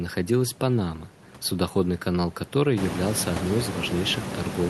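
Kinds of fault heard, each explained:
No technical faults can be heard in this recording.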